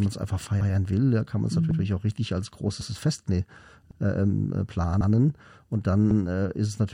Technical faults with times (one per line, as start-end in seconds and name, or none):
0.61-0.71 overlapping chunks
1.71-1.81 overlapping chunks
2.81-2.91 overlapping chunks
3.91-4.01 overlapping chunks
5.01-5.11 overlapping chunks
6.11-6.21 overlapping chunks